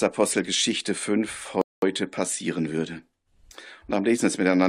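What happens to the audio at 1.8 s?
At 1.8 s the audio is in the last moments of a rebuffering stall. It runs from 1.61 s to 1.82 s. Playback ran short of downloaded data and halted. The sound drops to silence, then resumes exactly where it stopped. Nothing is lost, but 209 ms is added.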